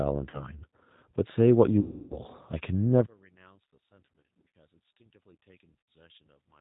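From the start, the speech carries the sound of the G.729 codec at 8 kbit/s. Everything above 4 kHz is gone, and the voice has a plainly audible rough, slightly synthetic grain, because it is rebuilt from a vocal tract filter, a pitch predictor and a few pulses per frame.

At 0.30 to 0.49 s comes the first VoIP packet loss concealed by the speech codec. About 30 ms of audio is missing, consistent with a single lost packet, and the decoder fills the gap by repeating its last pitch and filter at falling gain. A longer loss runs from 1.81 to 2.19 s, where 300 ms is missing, which fits roughly ten consecutive packets. Here the sound stretches into a fading buzzy tone or coloured noise and stays weak after packets return. That slow recovery separates concealment from a hard dropout or clean gap.

From 3.06 s to the end, the level falls by about 33 dB and the voice turns faint. The likely cause is one channel inverted, so the centred voice cancels when the channels are summed to mono. 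A plain volume drop would keep the tone intact. Here only the small mismatch between the channels is left.

Within that stretch, further concealment appears at 4.12 to 4.53 s, where 240 ms is lost in runs of up to 60 ms scattered over 480 ms. Finally, 90 ms is lost at 5.80 to 5.86 s.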